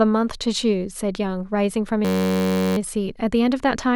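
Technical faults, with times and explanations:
2.05–2.77 s, system hang loop: The speech freezes into a steady buzz pitched at about 94 Hz. The playback system stalled while the sound hardware kept replaying the same ring buffer, so one 10.67 ms slice of audio repeats exactly, roughly 68 times over. A segment that short fuses into a tone at its repeat rate, not a stutter. The loop length fits a 512-sample buffer, and when normal playback resumes little or no audio appears to be missing.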